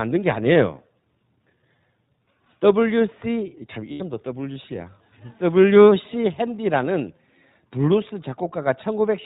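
iLBC codec, throughout the speech: this narrowband VoIP coder encodes each frame's excitation independently, so nothing above 4 kHz survives and the voice has a plainly audible rough, synthetic edge, which fits the 15.2 kbps mode with 20 ms frames.

Lost iLBC frames, from 3.92 to 4.02 s: packets went missing, and the decoder filled the gap by repeating the last pitch cycle blended with noise. It sounds like a briefly held, buzzy vowel, consistent with about four dropped 20 ms frames, before the voice snaps back immediately.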